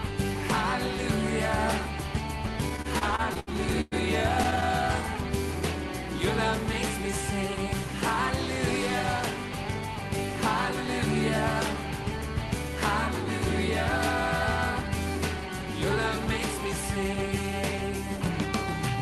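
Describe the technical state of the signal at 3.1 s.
At 3.1 s the audio sits inside repeated stalls (stutter), 2.69 to 3.94 s: the jitter buffer ran dry nine times, so the receiver extended the last sound, up to 106 ms at once, making it drag and stutter, with stretched frames appearing as flat smeared streaks on a spectrogram.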